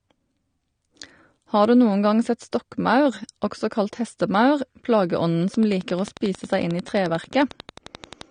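From the first moment the speech carries AAC compression damage, and it's plainly audible. Nothing reaches past 9.7 kHz, so the top is gone and everything sounds dull. Sibilants and held sounds get a fizzy, warbling smear. The likely cause is AAC-LC squeezed hard enough to drop that high band and quantise the rest coarsely, which fits a low bitrate around 32 kbps.

At 5.54 s a train of clicks comes in and runs to 8.22 s. It's a steady, regular ticking at 11.2 per second, about thirty pops in all, peaking around 10 dB above the speech, so it sits right on top. The clicks are all much the same shape and keep going through the gaps. That's most likely interference from nearby gear or a faulty connection or power supply.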